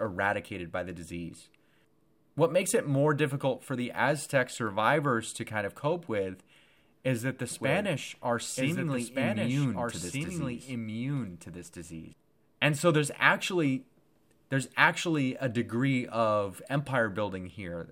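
Speech with a doubled audio track from 7.51 to 12.13 s: a second copy, about 5 dB quieter, trails by roughly one and a half seconds, likely from a slower second capture path. Unlike an echo, it stays full-band, never decays, and starts and stops abruptly.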